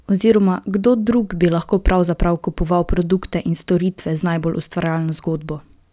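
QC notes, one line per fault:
No faults heard in this speech recording.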